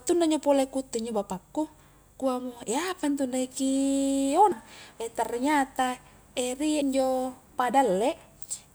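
At 2.22, 4.52 and 6.82 s the speech jumps forward abruptly, skipping about a fifth of a second each time. This is audio missing between chunks, likely from a recorder handing over between 2.5 s blocks and losing a slice at each changeover. Unlike a dropout, there is no silent gap: the two sides butt straight together. The evenly spaced skips, about 2.3 s apart, also mark it out.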